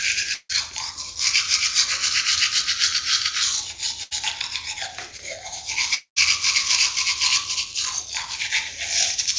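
A recording of everyday sounds carried over a call link, with nothing above 8 kHz, which fits a G.722 codec at around 64 kbps. At 0.34 to 0.51 s and again at 5.94 to 6.18 s the sound collapses into a fading buzz or hiss and then a short stretch of near silence before resuming further on. These are most likely long network dropouts, losing about 160 ms and 220 ms. A spectrogram shows smeared, decaying bands ending in a dark gap. At 4.03 to 4.13 s a burst of packet loss removes about 80 ms. The receiver holds the last sound and turns it down, so the waveform shows a shrinking, repetitive envelope and the spectrogram shows horizontally stretched energy fading out. Around 5.17 to 5.20 s, short concealed packet loss fills a 14 ms hole with a brief smear that blends back in. It appears as a faint blurred sliver in the spectrogram and a slight irregularity in the waveform.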